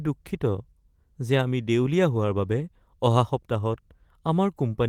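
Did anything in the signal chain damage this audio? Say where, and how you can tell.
No, nothing in the chain has harmed this speech: the Opus voice compression, running in hybrid mode at 24 kbps with 20 ms frames, keeps the full band, with content reaching about 20.4 kHz.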